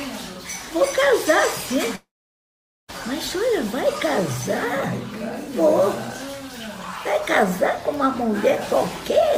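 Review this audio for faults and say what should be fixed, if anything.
There's a gap from 1.95 to 2.90 s, most likely a long network dropout. The last sound smears on and fades for about a tenth of a second, then goes silent for roughly 0.83 s, and the audio picks up again with about 0.94 s simply gone. A larger jitter buffer and a more stable connection, or local recording with later upload, would keep this from happening.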